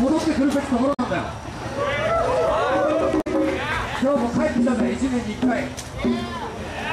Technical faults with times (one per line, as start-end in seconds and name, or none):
0.93-1.00 damaged data in a compressed stream
3.20-3.27 damaged data in a compressed stream